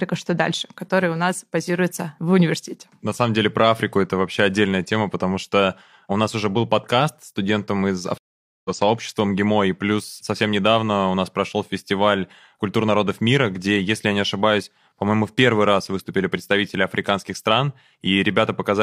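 A speech clip that drops out at 8.18 s: about half a second of silence (471 ms) until 8.70 s, then the speech picks up roughly 0.4 s further on, skipping material. This is a stream reconnect: the connection broke and the player restarted its decoder mid-stream.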